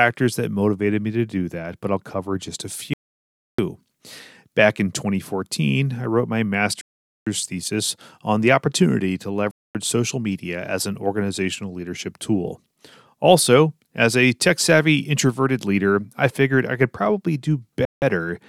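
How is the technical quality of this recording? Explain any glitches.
The speech drops out to dead silence four times, each gap a Bluetooth stall: at 2.94 to 3.59 s (0.65 s, after "I'll cover just a"), 6.81 to 7.27 s (0.45 s, between "I wrote my" and "thesis on the opportunity"), 9.51 to 9.75 s (0.24 s, between "on the opportunity to" and "social media as an"), and 17.85 to 18.02 s (0.17 s). Each time the audio halts abruptly, then resumes. The likely cause is radio interference delaying packets until the headphones' buffer emptied and playback waited for retransmissions.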